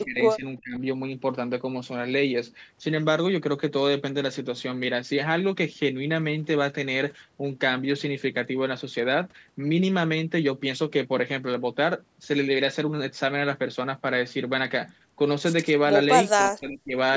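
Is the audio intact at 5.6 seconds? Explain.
Yes, the speech is intact at 5.6 seconds, with no dropout, click or distortion there, only the ordinary band limit of call microphone processing, which leaves nothing above 8 kHz.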